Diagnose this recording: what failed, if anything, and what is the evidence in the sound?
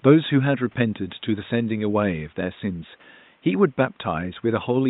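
No fault found.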